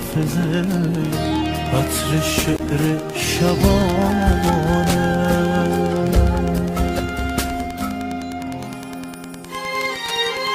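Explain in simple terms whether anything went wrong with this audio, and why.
A nearby Wi-Fi radio leaked into the audio circuit, causing Wi-Fi interference throughout the clip. The radio's regular beacon signal, sent every 102.4 ms, gets picked up as a steady ticking about ten times a second, quieter than the main sound.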